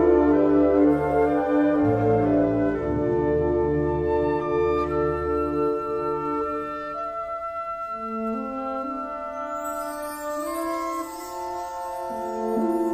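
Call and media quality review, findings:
No audible faults found; nothing to report.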